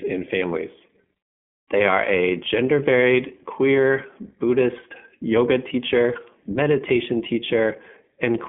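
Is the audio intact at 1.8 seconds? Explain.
No. The iLBC codec shapes the whole clip, including 1.8 s. Each 20 ms frame is coded on its own, so the speech sounds slightly rough and synthetic. Nothing passes above 3.6 kHz, giving a narrow telephone tone that fits a 15.2 kbps mode.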